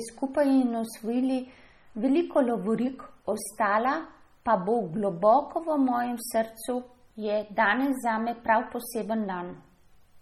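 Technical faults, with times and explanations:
Throughout, MP3 compression: speech sounds watery and swirly with nothing above 18.5 kHz, likely from a heavy encode around 32 kbps dropping weak frequency lines.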